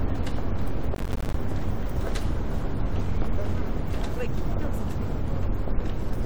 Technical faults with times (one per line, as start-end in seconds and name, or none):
0.95-1.34 processor overload crackle